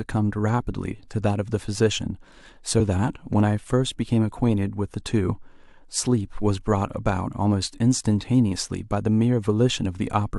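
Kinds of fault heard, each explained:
Damaged data in a compressed stream: a stretch of the encoded speech reached the decoder corrupted, so it could not read those frames correctly, lost its place in the stream and had to hunt for the next valid frame header before decoding resumed. The result is a very short chirp or blip cutting into the speech, heard twice here, at about 2.79 s and 5.27 s, each lasting under 20 ms.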